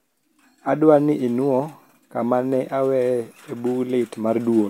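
Speech, with no technical faults audible anywhere.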